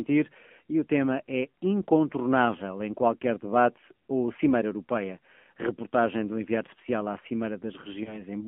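Throughout, the speech sounds thin and boxed-in, squeezed into a band of about 200 Hz to 3.4 kHz, with a plainly audible buzzy, synthetic edge. This is the AMR narrowband mobile codec. Its coarse texture points to a low mode around 7.4 kbps.

From 8.04 to 8.23 s there is a brief dip or warble, and the sound returns weak or rough for a moment. This is lost AMR speech frames: the decoder covered the gap by reusing its last pitch and vocal tract settings at falling gain, which fits a single 20 ms frame going missing.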